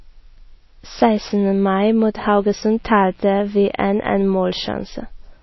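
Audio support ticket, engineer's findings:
Likely MP3 encoding at a starved bitrate, consistent with about 24 kbps. Throughout: treble cut above 5.8 kHz, plainly audible watery, swirling codec damage on speech.

Mains buzz, 2.14–4.22 s. Switching spikes from an unshielded or rectified supply inject 60 Hz harmonics. Steady raspy buzz, well below speech level.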